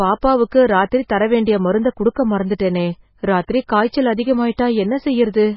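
From start to finish the speech carries heavy MP3 compression damage. Nothing is heard above about 5.6 kHz, so the treble is gone and s sounds lose their edge. The encoder seems to have been starved of bits, likely at a rate near 16 kbps. Weak frequency lines drop in and out from frame to frame. That gives the sound a watery, swirling texture with metallic chirps. Consonant attacks are smeared rather than crisp.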